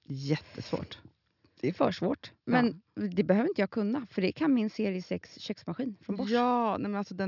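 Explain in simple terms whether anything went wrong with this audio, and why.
Nothing went wrong here.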